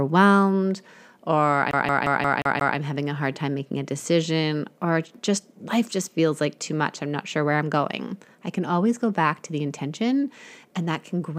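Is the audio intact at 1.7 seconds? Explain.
No. From 1.71 to 2.77 s, just before "having a hard time", a CD stuck on one turn replays the same 0.18 s of speech six times, each jump marked by a brief mute. The strictly even stutter sets it apart from random dropouts.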